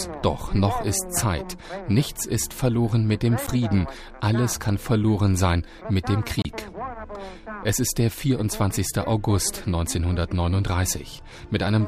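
Bluetooth stalls at 3.47 s and from 6.42 to 6.45 s cut the sound to silence for about 10 ms and then 29 ms before it resumes. The likely cause is wireless interference delaying packets, so the headphone buffer emptied and playback paused until retransmitted audio arrived.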